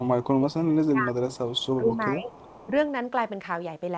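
From 0.00 to 1.21 s the speech sinks by as much as about 20 dB in places, totalling around a second of lost level. This is speech suppressed in double talk, most likely from an echo canceller that could not tell its own talker from the far side's loudspeaker echo and turned everything down. Unlike a dropout or packet loss, which come from lost data, this is the voice being turned down in level. It dips again, more gently (about 10 dB), between 1.79 and 2.32 s, and briefly, about 5 dB, at 2.66 to 2.71 s.

From 1.31 to 1.67 s, and again from 2.25 to 2.67 s, a faint delayed copy of the speech trails behind by 0.41 s, roughly 25 dB below the main voice. This is echo leak, likely from a loudspeaker-side canceller letting part of its microphone pickup return. Its fixed lag and the way it sounds like a detached repeat set it apart from room reverberation, which smears the sound continuously. Throughout, nothing reaches above 8 kHz, as the call path's bandwidth sets.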